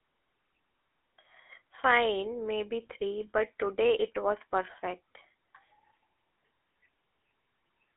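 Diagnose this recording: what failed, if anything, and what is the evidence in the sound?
The failure is at the codec stage: a GSM full-rate codec runs for the whole recording. The speech has a plainly audible buzzy, gravelly roughness, which fits a 13 kbps full-rate coder. The audible band runs from about 250 Hz to 3.5 kHz, and nothing passes above 3.8 kHz. The coder models the vocal tract as a filter. It excites that filter with a coarse, regularly spaced pulse train that keeps only every third excitation sample, which produces the grit.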